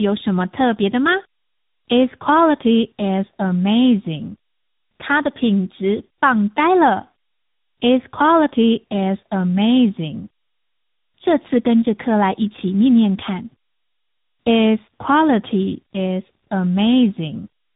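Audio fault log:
throughout: tandem speech coding. The speech has been coded twice in a row, which fits a low-rate AMR-NB stage feeding G.726. Each coder re-codes the last one's losses, leaving it rough, muffled and warbly. A spectrogram shows smeared harmonics and nothing above 3.8 kHz.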